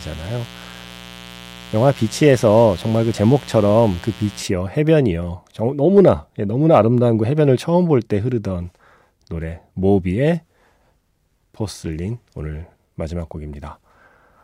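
From the start of the clip to 4.43 s, a steady, raspy buzz sits under the speech at roughly 20 dB below it, then stops. This is mains buzz at 60 Hz: sharp switching spikes from something like a dimmer, a rectifier or an unshielded cable reach the signal twice per mains cycle. Those spikes carry harmonics of 60 Hz up into the kilohertz range, which makes the buzz sound harsh rather than like a clean hum.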